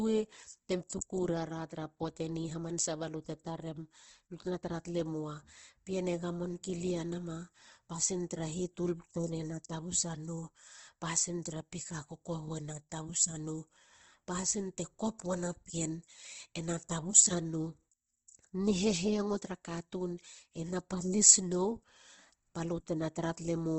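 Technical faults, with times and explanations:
Throughout, Opus compression: the speech has nothing above about 8.1 kHz, and the whole clip sounds plainly grainy and rough rather than swirly. This is likely an Opus encode in its CELT music mode at a low rate, something like 16 kbps. The encoder holds each band's energy but runs short of bits, so it fills the band with folded or noise-like content, and the wideband limit cuts the top octave.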